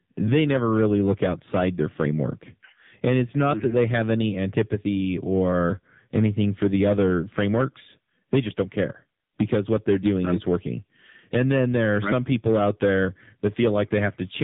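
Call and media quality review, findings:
Hard clipping, whole clip: crackly fuzz on louder syllables, peaks squared off. Probably an input gain stage overdriven by about 8 dB, with a couple of percent of samples flattened, and the flat tops spraying harmonics up the band.

AMR narrowband mobile codec, whole clip: nothing above 3.8 kHz, buzzy and synthetic throughout, heavy damage. Sounds like a low AMR-NB mode, around 6.7 kbps. Too few pulses per subframe to model the voice cleanly, so it buzzes.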